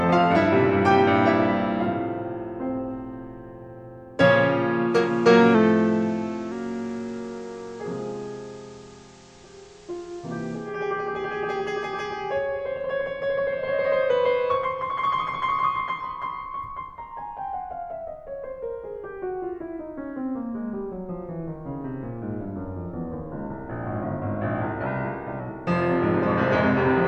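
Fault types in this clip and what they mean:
Digital radio blending to analogue: From 4.86 to 10.81 s the receiver cross-fades over 260 ms to the FM simulcast and back. The level drops about 1 dB, and hiss sits roughly 30 dB below the music.
Drift correction step: From 5.55 to 6.52 s the music slows by 6.28% and drops 112 cents, about a semitone. From 24.86 to 25.4 s it speeds up 6.28% and rises 105 cents. This is likely clock-matching software stepping the playback rate.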